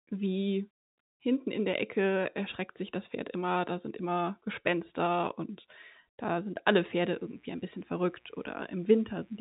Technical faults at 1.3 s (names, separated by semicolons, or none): none